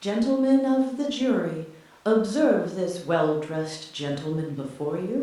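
No technical faults can be heard anywhere in the speech. Nothing in the audio points to a problem in how it was captured or delivered.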